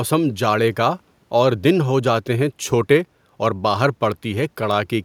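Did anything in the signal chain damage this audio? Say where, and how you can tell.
No, nothing in the chain audibly damaged this speech.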